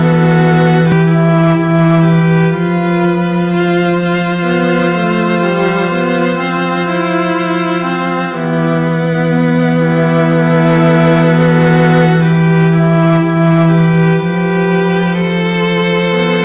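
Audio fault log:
throughout hard clipping. The signal is driven about 6 dB past what the chain can pass. Only a small share of samples go over, and those peaks are sliced flat. The flat tops add harsh harmonics, heard as crackle on the loudest moments.
0.92 s skip ahead. Playback jumps forward with no gap. Roughly a third of a second of audio is missing. It was dropped while later audio was already waiting, so the delay shrinks by about as much. Both sides join almost directly, giving an abrupt lurch.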